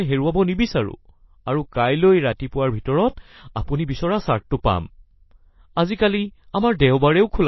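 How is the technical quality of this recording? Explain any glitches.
The recording is clearly degraded. Throughout the speech there is nothing above 5.8 kHz, and the sound is watery and swirly, with smeared consonant onsets and chirpy sibilants. This is likely MP3 compression at a starved bitrate, consistent with roughly 24 kbps. The encoder cuts the treble at a fixed point and zeroes weak frequency lines, which flicker on and off between frames. That flickering sets it apart from a simple low-pass filter, which dulls the top end but leaves no swirling or metallic chirps.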